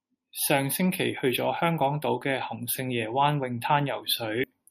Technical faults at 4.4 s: compressed frames skipped

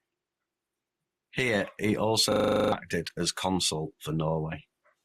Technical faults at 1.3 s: none

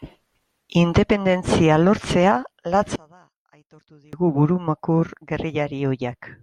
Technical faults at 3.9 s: one channel inverted

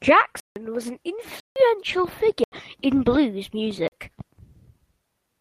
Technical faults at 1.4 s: block of digital silence

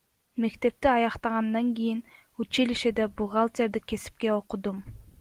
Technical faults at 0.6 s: none

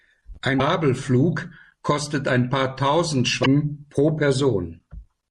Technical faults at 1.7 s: MP3 compression

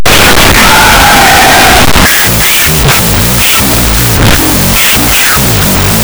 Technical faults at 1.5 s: wrong sample width

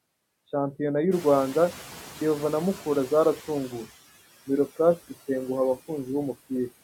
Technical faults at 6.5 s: noise suppressor artifacts

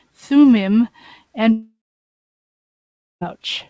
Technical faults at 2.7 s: long network dropout

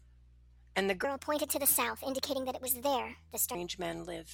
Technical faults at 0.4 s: none

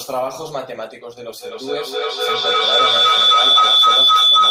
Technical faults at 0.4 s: none

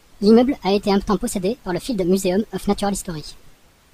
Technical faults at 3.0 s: wrong sample rate

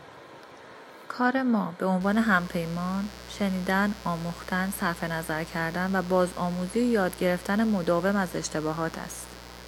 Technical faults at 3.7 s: mains buzz

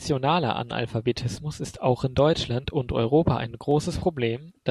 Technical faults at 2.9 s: clock drift buffer slips

